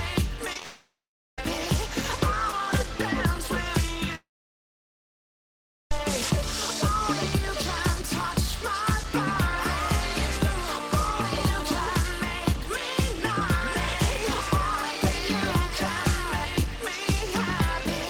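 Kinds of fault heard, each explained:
Repeated packet loss (robotic sound): choppy stretch from 0.45 to 0.62 s, with four brief holes up to 23 ms each patched by repeating preceding sound.
Long network dropout: at 0.62–1.43 s and 4.15–5.92 s the sound fades into silence, then returns with a section gone, likely because audio stopped arriving.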